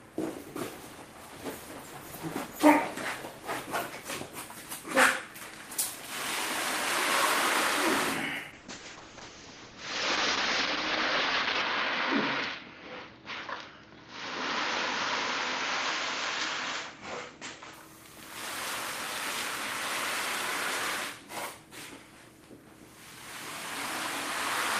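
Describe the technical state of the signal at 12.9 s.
A call bitrate drop runs from 8.52 to 17.79 s: the encoder starved of bits codes coarsely and cuts the top end from 20 kHz to 8 kHz, fitting a fall to around 8 kbps, so the sound turns muffled and rough.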